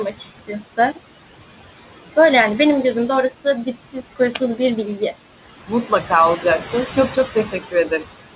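A noise suppressor is cutting the background by about 16 dB throughout this speech clip, working frame by frame, so the room noise, about 14 dB below the voice, drops away between phrases and swells back under them. The voice sits within a band that stops near 4 kHz, which fits a G.711 mu-law call codec. The suppressor also mistakes speech for noise, cutting speech at 0.11–0.78 s, 3.66–4.6 s and 6.94–8.05 s. In each span, roughly a third of a second of soft consonants and word endings is pulled down by up to about 15, 16 and 12 dB, so they sound swallowed.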